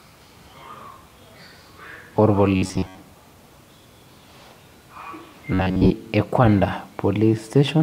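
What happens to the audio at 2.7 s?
Robotic sound from repeated short buffers runs from 2.56 to 2.97 s, covering the moment at 2.7 s. Through that span the speech hardens into a rigid, metallic buzz near 94 Hz that only loosely tracks the words. The likely cause is audio arriving too slowly, so a fragment of about 11 ms was looped to fill the gaps for most of the span, skipping the real audio and imposing that fixed buzz pitch.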